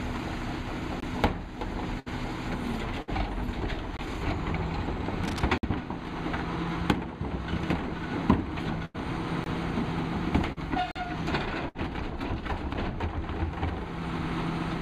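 Right at 1.00 s there's a block of digital silence: about 21 ms of the output simply drops to silence and snaps back with no fade, so you hear a little tick-and-hole. That length fits a 1024-sample buffer that wasn't filled in time. The same thing comes back at 3.97 s, then as a longer 54 ms hole from 5.58 to 5.63 s, again at 9.44 s, as a 43 ms gap from 10.91 to 10.96 s (which fits a 2048-sample buffer, two blocks' worth), and finally as a brief 6.5 ms tick at 12.74 s.

Between those, from 2.00 to 2.08 s, there's a burst of packet loss. About 60 ms of audio never arrived, and the receiver covered the gap by stretching the last sound out for roughly 65 ms while turning it down. That gives a held, fading buzz or hiss, and then the sound jumps ahead with that stretch missing. It happens again from 3.02 to 3.10 s, more heavily from 8.85 to 8.96 s where about 80 ms is gone and 90 ms is filled, and from 11.69 to 11.77 s.

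From 5.23 to 5.43 s there's a patch of cable scratch noise: dense, uneven crackle and rustle laid over the sound at around 10 dB below it. The likely cause is a worn cable, connector or control being moved, with its contact resistance jumping around.

At 10.52 to 10.58 s there's a short concealed packet loss. Only about 40 ms went missing, and the receiver filled it by continuing the last sound for roughly 42 ms before blending back into the real audio. It comes across as a quick smear or wobble rather than an obvious dropout.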